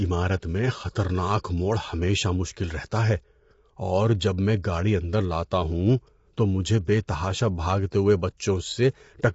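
Low-delay AAC compression runs through the whole of this speech clip. The coding damage is plainly audible: the voice sounds rough and grainy, with noise filling the gaps between pitch harmonics, and nothing remains above about 7.7 kHz. The likely cause is AAC-ELD at a low bitrate, around 24 kbps by the sound of it. Its short frames cannot separate closely spaced harmonics well, and with few bits to spare the encoder drops the top band entirely.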